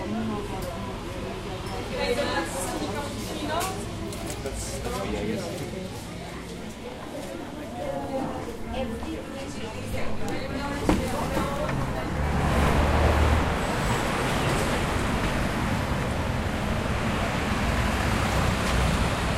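No technical faults can be heard anywhere in this recording of sounds. There is nothing in it to flag.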